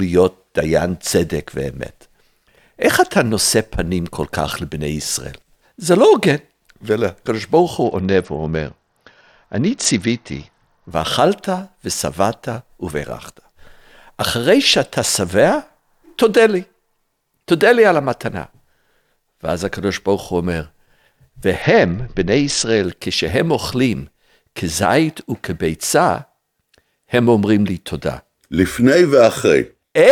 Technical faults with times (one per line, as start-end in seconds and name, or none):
7.84-10.91 Bluetooth SBC bit pool drop
15.29 bit error spike
21.62-22.84 Bluetooth SBC bit pool drop